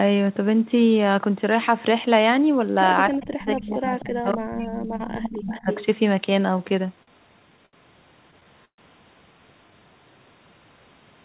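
Speech suppressed in double talk runs from 3.1 to 5.7 s. The level dips repeatedly, at its deepest by about 30 dB, for around two seconds in total, with parts thinned or cut out. The likely cause is both ends talking at once: the echo canceller could not tell the near talker from the loudspeaker echo, so it turned everything down.

Echo leak overlaps that stretch, in three places: 3.13 to 3.26 s, 3.72 to 4.03 s, and 5.14 to 5.85 s. A delayed copy of the speech comes back, trailing by 258 ms in the first two and 304 ms in the last. It sits about 25, then 20, then only 10 dB below the speech. The likely cause is a far-end echo canceller that let part of its loudspeaker pickup through.

Repeated stalls (stutter) occur from 6.58 to 7.75 s. The jitter buffer ran dry ten times, the longest wait 73 ms, and each gap was bridged by stretching the last sound. That adds 190 ms, about a sixth of the span. 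Nothing is lost, but the speech drags and catches in a halting rhythm as the late packets keep the receiver waiting.

A call audio freeze follows at 8.65 to 8.8 s. The last sound is held as a short fading buzz or hiss, then about 90 ms of silence, before the speech resumes exactly where it stopped. In all, 130 ms is inserted and nothing is dropped. This is likely packets held up in transit, so the buffer emptied and its delay grew by that same 130 ms.

A jitter buffer slow-down comes at 9.71 to 9.94 s. To rebuild its reserve, the receiver repeated single pitch periods or bits of pauses, adding 37 ms. The sound plays at 88% speed with unchanged pitch, so syllables are audibly drawn out.

Throughout, nothing reaches above 4 kHz. That is the narrowband limit of the G.711 A-law call path, and it fits a 64 kbps stream.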